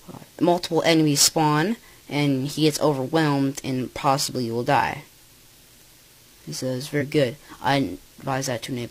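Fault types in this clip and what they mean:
Compressed frames skipped: at about 6.97 to 7.03 s the sound jumps forward by roughly two 46.4 ms codec frames, about 100 ms lost. Unlike a dropout there is no silent gap.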